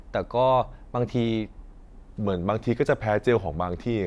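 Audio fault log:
1.79–4.06 s, wrong sample rate: speech slows to 0.92 times speed and drops 1.47 semitones together. This fits 24 kHz audio played at 22 kHz.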